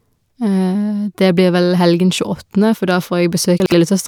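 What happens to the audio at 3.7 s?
Between 3.6 and 3.72 s the audio has chunks out of order: a 60 ms chunk arrives one chunk late and plays after its successor. Nothing is missing, but the swapped segments create three hard joins, heard as a brief jumbled stutter.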